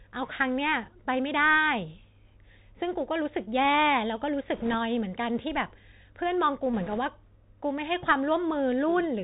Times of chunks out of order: none

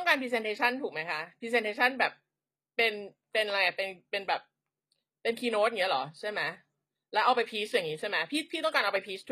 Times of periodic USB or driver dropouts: none

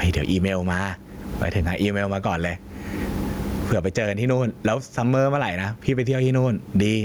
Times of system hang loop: none

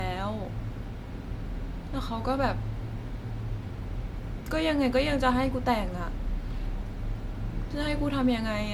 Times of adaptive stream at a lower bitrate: none

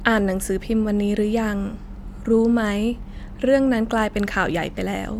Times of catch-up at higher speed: none

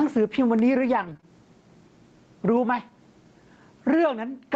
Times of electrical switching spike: 0.59

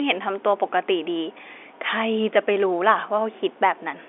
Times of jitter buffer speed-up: none

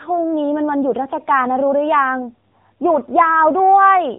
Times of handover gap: none

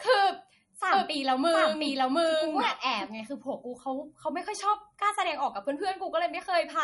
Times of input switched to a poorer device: none

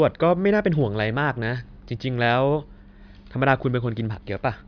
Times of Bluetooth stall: none

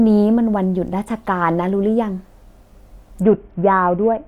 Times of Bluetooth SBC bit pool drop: 3.22-4.28

